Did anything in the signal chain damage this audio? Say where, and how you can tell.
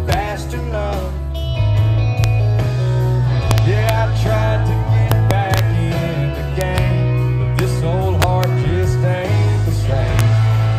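Yes. Integer overflow in a fixed-point gain or mixing stage, most plausibly during sample-format conversion, wrapped peaks to the opposite sign instead of limiting them. Violent cracks land at 0.12 s, 2.24 s, 7.59 s and 10.2 s, with longer bursts at 3.51–3.89 s, 5.11–5.59 s, 6.61–6.78 s and 8.22–8.44 s. Pushing only about 0 to 2 dB past full scale was enough to flip each peak across the whole range, which sounds far harsher than clipping.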